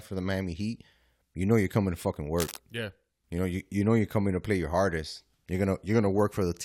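Right after "you're coming to fucking", from 2.38 to 2.58 s, a rough scratching rustle sits about 10 dB under the speech for a fifth of a second. This is cable scratch noise, likely from a worn cable or connector being moved so its contact resistance jumped erratically.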